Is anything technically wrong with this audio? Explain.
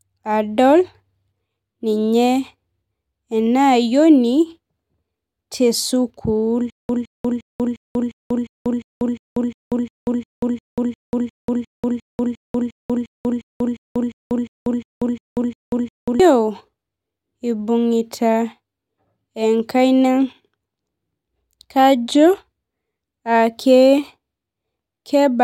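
Yes. From 6.7 to 16.2 s there is a stutter with silent gaps: a 163 ms fragment repeats 27 times, each followed by 191 ms of digital silence, likely a stalled stream replaying its last buffer. On a waveform it appears as identical blocks separated by flat lines, and on a spectrogram as a regular stripe pattern every 353 ms.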